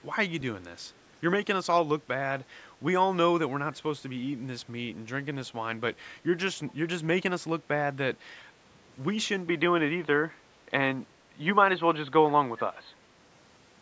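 A speech clip with two faults. From 6.67 to 6.73 s there is an echo leak: a faint delayed copy of the speech, roughly 30 dB below it, arriving 383 ms late, most likely a far-end loudspeaker's echo canceller letting some of the sound back through. That long gap sets it apart from room reverberation, which trails directly off the sound. Then, from 9.48 s to the end, the input is switched to a poorer device, likely a different microphone or a headset call profile. The band narrows abruptly, with no gap at the switch, a new faint noise floor and a level shift of a few dB. That change of tone, level and noise together points to a device change rather than a codec narrowing the band.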